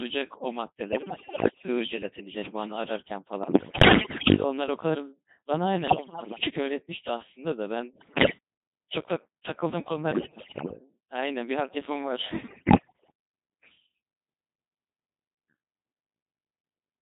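Speech heard through a Codec 2 vocoder, heavily degraded throughout. The voice is rebuilt from sine waves using only pitch, voicing, level and a rough spectral shape, so it sounds robotic and buzzy. The thinness fits a rate near 2.4 kbit/s. There are also bursts of bit errors on digital voice radio at 0.92–1.68, 3.44–4.44, 5.88–6.50, 7.94–8.38, 10.12–10.77 and 12.48–13.10 s. In each burst, corrupted frame parameters make pitch, loudness and tone lurch into warbles and bleeps. The damage suggests roughly 10 to 15 percent of bits flipped.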